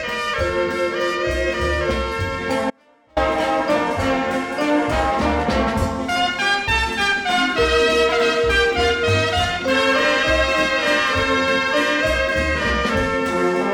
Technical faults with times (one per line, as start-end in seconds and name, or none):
2.70-3.17 audio dropout to a faint residue